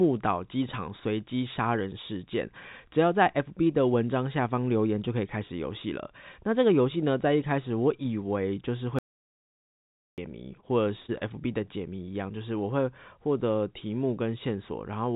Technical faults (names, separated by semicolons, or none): audio dropout to silence; short concealed packet loss; short stall from a late packet